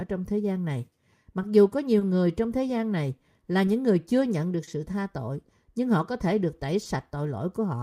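Throughout the speech, clock drift between sender and receiver runs the sender's clock roughly one and a half percent slow, so the jitter buffer keeps draining. The receiver repeatedly stretches short pieces to compensate, giving small, uneven timing hiccups across the whole clip.

At 1.99 s, 4.64 s and 6.83 s, a short stall from a late packet empties the buffer. The receiver holds the last sound for about 20, 30 and 20 ms, then resumes with nothing missing, leaving a brief drawn-out sound with a slight buzz or dip.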